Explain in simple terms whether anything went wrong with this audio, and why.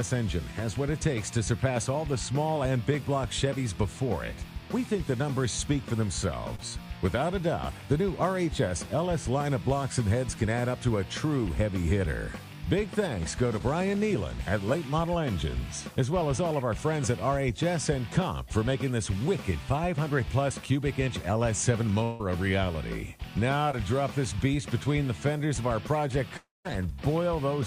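Yes, a few things went wrong on the way from sender to listener.

Short concealed packet loss happens three times: at 6.55 to 6.61 s, 13.59 to 13.62 s, and 23.71 to 23.75 s. Small chunks of the audio, about 40 ms in the first case and 20 ms in the other two, arrived too late to be played. The receiver patched each hole by stretching out the sound just before it, so you hear a quick smear or wobble rather than a clean gap.

Two longer interruptions, at 22.04 to 22.21 s and 26.37 to 26.67 s, are likely a long network dropout, with about 160 ms and then 280 ms of audio never arriving. The receiver kept the previous sound going as a fading buzz or hiss to cover the hole. In the second, longer one, that filler dies away into a short silence before the real audio returns, and the missing part is simply gone.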